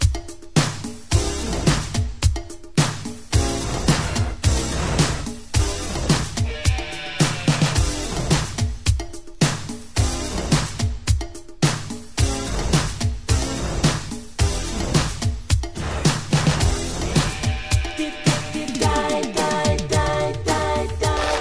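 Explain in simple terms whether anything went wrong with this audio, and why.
Nothing went wrong with this audio, since no fault can be heard anywhere in it.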